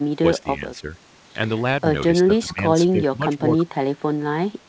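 At 0.19 to 0.24 s, 0.43 to 0.88 s and 2.16 to 3.43 s the speech dips and thins in patches: a brief drop of about 15 dB, then a shallow one of about 5 dB, then broken dips of about 10 dB. This is speech suppressed in double talk, likely from an echo canceller that could not separate this side's speech from overlapping far-end echo and turned both down. The waveform shows notched envelope gaps. On a spectrogram the energy fades in blocks beneath the wideband band edge near 8 kHz.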